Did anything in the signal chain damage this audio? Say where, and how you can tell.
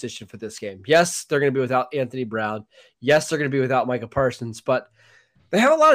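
Yes, there's hard clipping in three places: 0.92 to 1.02 s, 3.10 to 3.17 s, and 5.63 to 5.93 s. The speech peaks get a short crackly, gritty edge there. The first two are driven about 4 dB past full scale and the last about 2 dB. That's a stage running out of headroom, most likely the converter or a fixed-point format conversion, chopping the waveform tops flat and spraying harmonics up high.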